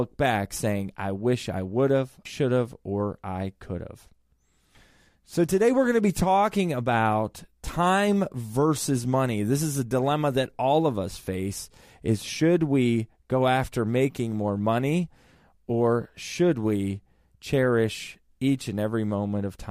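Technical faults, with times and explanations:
0.14 to 19.67 s, clock slip clicks: faint, regular ticks sound under the speech about every 50 ms, close to a soft rattle. Each is one sample dropped or repeated. The likely cause is two unsynchronised clocks drifting apart by around 400 ppm.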